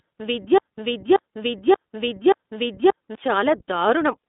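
Throughout the speech, the iLBC codec is plainly audible. The sound is narrowband, confined to a line band of roughly 250 Hz to 3.7 kHz, with nothing above 3.8 kHz, so sibilants lose their edge and the voice turns slightly rough and synthetic. Each 20 ms frame's excitation is coded on its own, and the character points to the 15.2 kbps mode. On a spectrogram, energy stops at a flat ceiling near 3.8 kHz, and the lowest band is thin.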